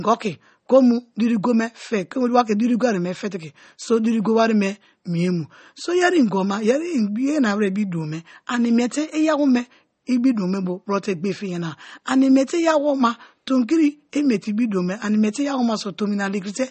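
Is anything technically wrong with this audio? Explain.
Yes. Throughout the speech there is a hard ceiling with nothing above 8.4 kHz, and the damage is plainly audible: a watery, swirling texture, chirpy s sounds, and softened consonant attacks. This is likely MP3 compression at a starved bitrate, which fits about 32 kbps. The encoder drops the treble at a fixed cutoff and discards weak frequency lines that flicker in and out between frames. A simple low-pass filter would dull the top end but leave no swirl or chirping.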